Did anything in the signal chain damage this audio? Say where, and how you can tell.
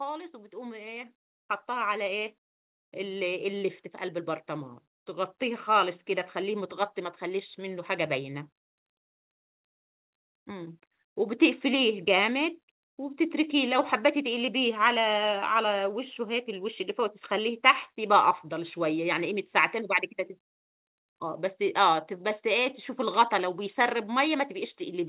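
Yes. Automatic gain rising in the call processing stage: from 0.56 s to 10.86 s the speech and the background noise swell together by about 13 dB. The gain control judged the input too quiet and slowly raised its gain, lifting everything equally.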